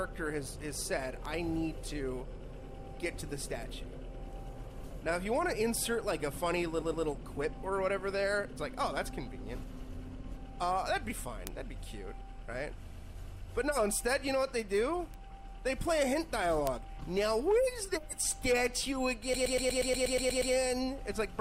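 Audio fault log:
1.25, 11.47, 13.77, 15.14 and 16.67 s: bit error spike. Each is a single sharp tick, over in a sample or three (the first is slightly longer, at three samples), where one flipped bit makes the value jump by a power of two and snap straight back. It has no decay, no gap and no pitch, and it spreads across the whole spectrum regardless of the sound around it. That separates it from a dropout, which leaves a hole, and from a stutter, which repeats material.
6.81 to 7.05 s and 12.89 to 13.13 s: repeated frames. A 120 ms block of compressed audio, which fits a run of several codec frames, plays twice more each time, adding 240 ms. The result is a rhythmic stutter of identical material. Unlike a bit error spike, the disturbance lasts and recurs at a fixed 120 ms period.
19.33 to 20.53 s: repeated frames. The same 120 ms block loops ten extra times and adds 1.2 s. That long a run becomes a buzzing machine-gun loop rather than a brief stutter, and the seams fall at a steady rate of about 8 per second. 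The exact repetition of content is what separates it from a rough or granular codec artefact.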